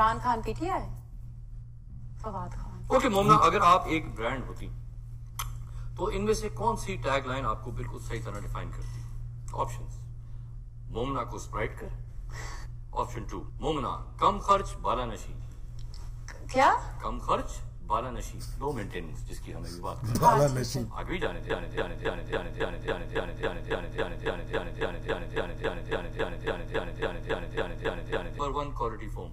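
From 21.50 s to 28.39 s the audio falls into a broken-record loop: a fragment of about 276 ms repeats exactly and back to back, 25 times over nearly 7 seconds, giving a rigid, stuttering rhythm. The likely cause is a stall in the player, encoder or stream, which kept sending the last chunk it held instead of new material. Whatever should have played during that stretch is missing.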